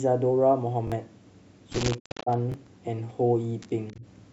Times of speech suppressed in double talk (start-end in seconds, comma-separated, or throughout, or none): 1.99-2.30, 3.93-4.05